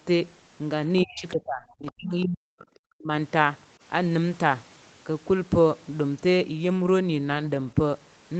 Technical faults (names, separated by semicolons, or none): other side's voice leaking through; speech suppressed in double talk